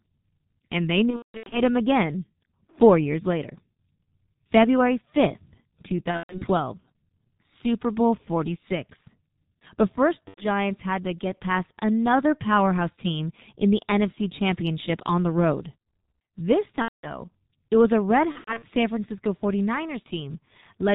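Throughout, the speech passes through a G.723.1 codec at about 6.3 kbit/s, which discards everything above 4 kHz and tracks the voice only in coarse 30 ms steps. The result is heavily muffled, hoarse speech with smeared consonants.

VoIP packet loss concealed by the speech codec strikes at 1.11–1.62 s, 6.11–6.47 s, 10.28–10.48 s, 16.82–17.08 s and 18.32–18.64 s. When packets go missing, the decoder keeps extrapolating from its last pitch and filter while lowering the level. Gaps of roughly 90 to 330 ms become buzzy tones or coloured noise that fade, muted from the third lost frame in a row, and the speech sounds weak or distorted just afterward.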